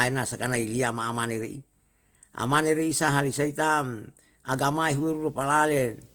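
Throughout the speech, a low-bitrate encoder, likely Opus compression in its music mode at a rate around 24 kbps, runs short of bits and fills bands with folded or noisy content. Voiced sounds turn rough and grainy, though the bandwidth stays full, reaching about 20.2 kHz.

From 4.78 s to the end, a screen or video cable couples into the audio path, causing video or display buzz. A 59.94 Hz field-rate buzz with hash above it sits well below the speech, alongside a very high line-rate tone at 15.7 kHz.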